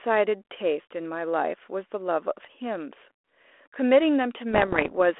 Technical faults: bit errors on an ADPCM link

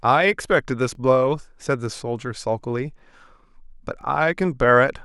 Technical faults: overlapping chunks

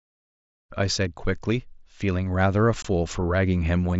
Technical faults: unconcealed Bluetooth headset packet loss

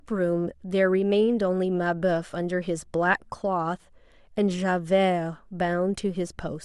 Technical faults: none

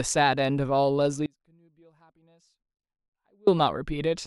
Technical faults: audio dropout to a faint residue

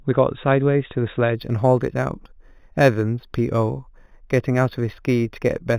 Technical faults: imaging from linear upsampling

